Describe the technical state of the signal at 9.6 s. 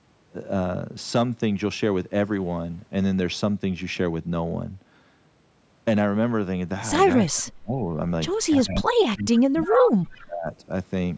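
At 9.6 s the speech is being suppressed in double talk, from 8.56 to 10.5 s. The level sinks by around 30 dB at its deepest. The likely cause is an echo canceller ducking the talker while both sides speak.

An echo leak overlaps it from 9.62 to 9.82 s. A copy of the voice returns 327 ms late, around 10 dB below the speech. This is likely residual loudspeaker echo that the canceller failed to remove.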